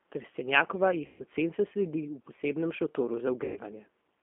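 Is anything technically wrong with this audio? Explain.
Yes. The call ran through the G.729 codec for its whole length. The low-rate frame model, which fits 8 kbit/s G.729A, and a 200 Hz to 3.4 kHz line band leave the speech thin, rough and slightly synthetic.

There is VoIP packet loss concealed by the speech codec from 1.06 to 1.22 s and again from 3.44 to 3.60 s. The decoder filled gaps of about 140 ms and 120 ms by extending its last pitch and filter, which sounds like a fading buzzy smear before the speech recovers.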